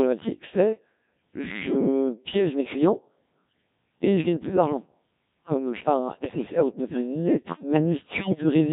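From the start, the speech carries the Codec 2 vocoder sound with heavy damage, which fits a rate near 1.3 kbit/s. The decoder rebuilds the voice from sine waves using only pitch, voicing, energy and a spectral envelope, so it comes out robotic and buzzy.

Bit errors on digital voice radio hit from 6.20 to 6.59 s, just before "où tu dois faire", and from 8.12 to 8.43 s, right after "dois faire une lettre". Flipped bits corrupt each frame's pitch, level and voicing, so the voice lurches and warbles into bleeps and gibberish.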